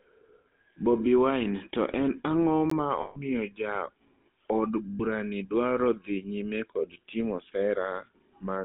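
Speech heard through the GSM full-rate codec: the band runs from about 200 Hz to 3.6 kHz, and a buzzy, gravelly roughness sits on every voiced sound. That grain, unlike the smearing of a plain low-bitrate codec, comes from the pulse-driven vocal-tract model, which fits the 13 kbps full-rate scheme. At 2.70 s a block of digital silence, only about 15 ms long, drops the audio to silence and back with hard edges, heard as a sharp tick rather than a fade. From 3.02 to 3.17 s (about 140 ms) and from 4.90 to 5.02 s (about 100 ms), lost GSM frames hold the previous sound as a metallic, ringing drone. This is what separates these losses from the silent gap: instead of cutting to nothing, the decoder keeps repeating its last good settings.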